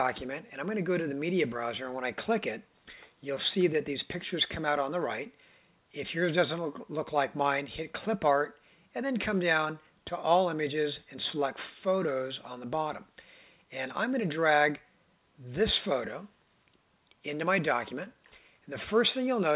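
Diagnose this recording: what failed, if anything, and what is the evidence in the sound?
Nothing failed: the sound shows only the narrow band of a working call path, with nothing above 4 kHz, and there is no evidence in it of any fault.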